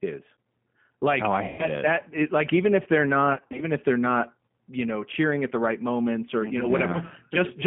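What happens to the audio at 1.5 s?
At 1.48 s, VoIP packet loss concealed by the speech codec takes over until about 1.64 s. Roughly 110 ms of packets never arrived, so the decoder kept replaying its last pitch and vocal tract filter while steadily lowering the gain. The sound smears into a buzzy tone or coloured noise that fades. On a spectrogram the harmonics freeze into flat horizontal bands that dim across the gap. The waveform shows a repetitive, shrinking pattern instead of the normal, changing speech cycles.

Around this moment the G.729 codec also shapes the audio, as it does across the whole clip. This 8 kbit/s G.729A coder rebuilds speech from a filter, a pitch predictor and a few pulses per frame, which gives it a plainly audible rough, synthetic edge. A spectrogram shows the band limited to roughly 150 Hz to 3.4 kHz, with nothing above. Because each frame depends on the previous one, the sound stays weak or distorted for tens of milliseconds or more after 1.64 s.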